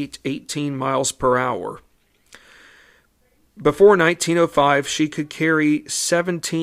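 No technical faults are audible anywhere in the recording.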